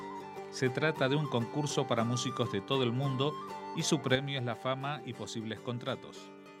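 At 4.16 s the level drops abruptly by about 6 dB and stays there until the end of the clip, a sudden gain jump. The change happens in one step with no fade, and the sound and its background noise fall together, so the floor shifts along with the foreground. This likely comes from a digital gain setting or bit shift applied instantly between two samples rather than ramped in over a short interval.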